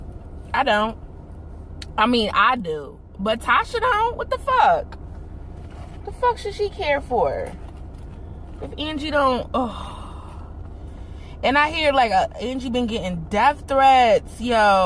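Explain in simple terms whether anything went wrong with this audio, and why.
Nothing went wrong here.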